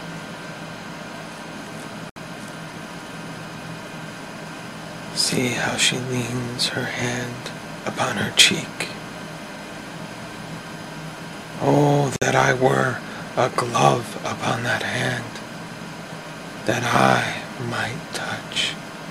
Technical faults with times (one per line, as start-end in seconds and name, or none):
2.10-2.16 gap at a join of encoded pieces
12.16-12.22 gap at a join of encoded pieces